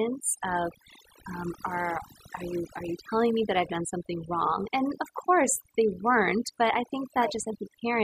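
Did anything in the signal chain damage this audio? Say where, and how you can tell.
Yes. The damage comes from call processing: overdone noise removal, present throughout the speech. The gaps fall to near silence with twinkling specks. An over-aggressive suppressor is gating individual frequency bands near its noise estimate, taking quiet speech components with them.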